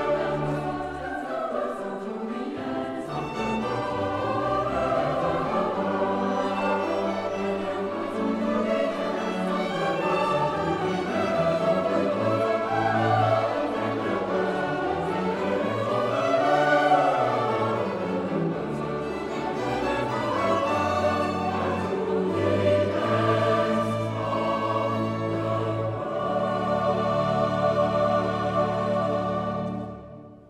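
Nothing in the audio stood out as a technical problem on listening.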